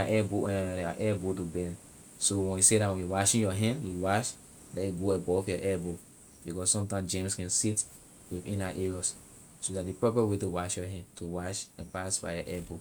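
No technical faults can be heard anywhere in this speech recording. No dropouts, clicks, distortion or other defects break into the audio at any point.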